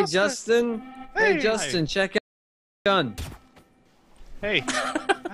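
The input signal was likely lost between 2.18 and 2.86 s, an audio dropout to silence: the sound cuts out abruptly, leaving 0.68 s of silence with no room tone.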